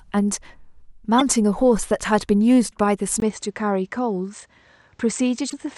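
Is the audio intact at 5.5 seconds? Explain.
No. From 3.20 s to the end, the recording likely switched its input to a poorer device, with a 20 ms gap at the switch. Nothing passes above 8.6 kHz, so the sound is duller and a few decibels quieter, over a new, faint noise floor.

Between 5.46 and 5.54 s, the compressed stream carries damaged data. The decoder misreads those frames and loses sync until it finds the next valid header, which produces a brief squawk or blip.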